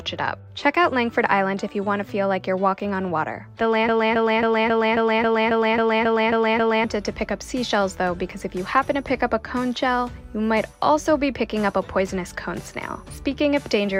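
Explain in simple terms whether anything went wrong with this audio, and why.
Something in the playback or streaming chain likely stalled and kept resending the last small piece of audio it was holding. From 3.89 s to 6.84 s you hear a broken-record loop: the same short snippet, about 0.27 s long, plays 11 times back to back with no gaps, like a skipping CD. Whatever should have played during those three seconds is simply missing, and the sound picks up again after 6.84 s.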